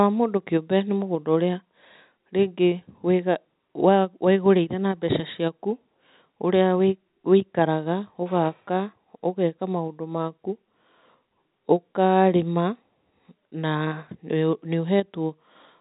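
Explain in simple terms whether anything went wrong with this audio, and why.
Nothing went wrong: the speech came over a normal phone-style call link using the G.711 mu-law codec, which carries nothing above 4 kHz and so sounds narrower than a direct recording, but that is how this kind of call line is designed, not a fault.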